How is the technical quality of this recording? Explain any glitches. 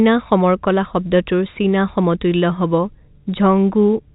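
Nothing here counts as a glitch: the speech simply carries the narrow, boxy character of ordinary G.711 telephone coding, with nothing else going on.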